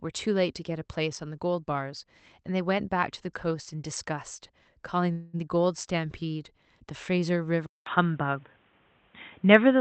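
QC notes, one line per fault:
5.11–5.35 s, call audio freeze: the speech stalls for about 0.24 s and is bridged by a fading buzz rather than silence, likely because packets were held up and the jitter buffer ran dry; when they arrive the audio resumes from where it stopped, so nothing is lost, only delayed.
7.66 s to the end, input switched to a poorer device: after a 0.2 s silence the sound turns dull and narrow, with nothing above 3.8 kHz, a level shift of roughly 5 dB and new background noise well below the speech, likely a change to a lower-grade microphone or headset profile.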